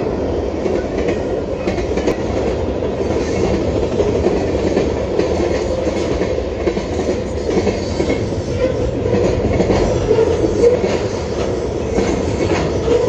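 At 2.12, 5.18, 7.50 and 10.75 s, damaged data in the compressed stream makes the decoder misread frames and lose sync, giving brief chirps or blips. Each appears as a thin broadband vertical streak on a spectrogram and a sharp glitch in the waveform.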